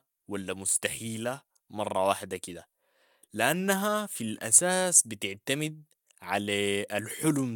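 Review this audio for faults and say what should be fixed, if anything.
Nothing stood out on listening to this speech recording, so there is nothing here that needs fixing.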